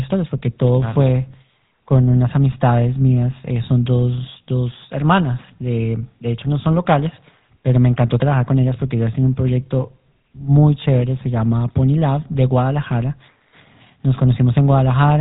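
GSM full-rate codec damage runs throughout this speech, clearly audible: a buzzy, gravelly roughness from coarse pulse excitation, consistent with 13 kbit/s coding, and nothing above 3.8 kHz.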